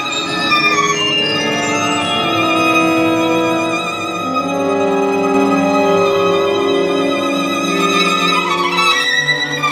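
From 5.35 s to 9.05 s the audio carries a doubled audio track: a second, full-band copy of the same material runs around 300 ms behind the original at roughly the same level. The copy adds no decay or room colouring, and it cuts in and out abruptly at those two points. The likely cause is the signal being captured a second time through a slower path, or an edit that left two offset copies in place.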